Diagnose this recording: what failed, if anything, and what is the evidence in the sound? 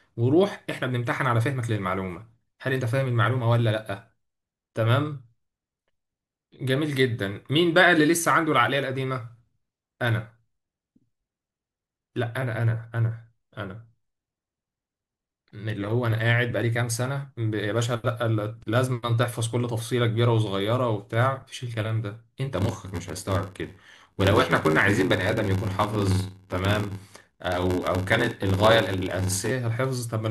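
A buffer-stage block size mismatch (padded) from 22.54 to 29.51 s: zero-filled gaps give an 86 Hz buzz, speech slows to 0.861×, which fits 512-sample reads.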